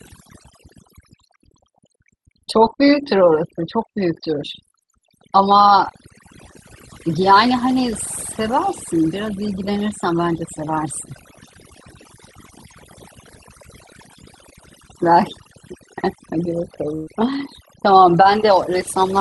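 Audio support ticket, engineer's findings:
Overdone noise removal, throughout. Background pulled to near silence with twinkling specks. Noise suppressor set too aggressive, gating bands near its noise estimate. Spectrogram: blank inter-word gaps dotted with isolated time-frequency blips, speech edges eaten away.

Burst of packet loss, 16.95–17.09 s. Sound freezes into a held buzz or fading hiss, then resumes with about 120 ms gone. Jitter buffer concealment extending the last frame over a multi-packet gap. Waveform: repeated decaying cycles; spectrogram: smeared stationary band, then abrupt jump.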